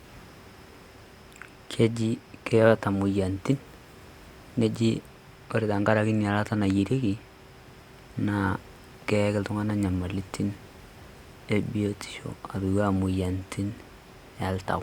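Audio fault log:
No technical faults heard.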